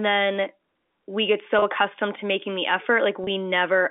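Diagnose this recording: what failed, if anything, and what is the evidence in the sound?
Packet loss with pitch repetition at the network stage: at 1.59 s, after "then we get", and at 3.24 s, after "accustomed to making the", about 30 ms of sound is replaced by a briefly held, buzzy repeat of the last pitch period. Each gap fits a single lost packet on this G.711 call. The concealment fills the gap instead of leaving silence, which rules out a plain dropout.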